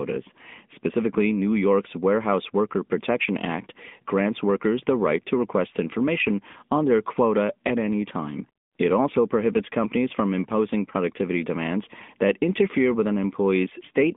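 A speech clip carried through the AMR narrowband mobile codec from start to finish: nothing passes above 3.7 kHz, the line band runs about 200 Hz to 3.6 kHz, and the voice has a plainly buzzy, synthetic texture, which fits a mid-rate mode around 10.2 kbps. That pulse-modelled buzz, not just the missing treble, separates it from a simple low-pass filter.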